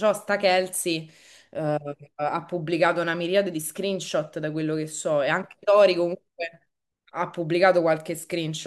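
No technical faults are audible.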